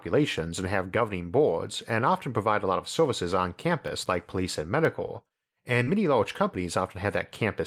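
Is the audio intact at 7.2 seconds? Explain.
Yes, at 7.2 seconds the speech plays through intact, with no dropout, click, distortion or other fault at that moment.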